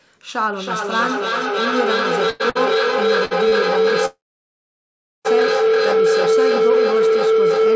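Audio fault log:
0.42–7.76 s, feedback howl: a tone around 400 Hz rising to about 8 dB above the speech and pulsing roughly every 0.3 s. Sound loops between loudspeaker and microphone, gaining level on each pass.
2.30–2.42, 2.50–2.57, 3.25–3.33, 3.49–3.54 s, short stall from a late packet: sound briefly held with a faint buzz for 97, 56, 56 and 27 ms. The receiver stretched the last sound until the delayed packet arrived.
4.06–5.27 s, call audio freeze: a fading buzz, then about 1.1 s of silence, before the speech resumes where it stopped. This is likely packets held up in transit, draining the jitter buffer.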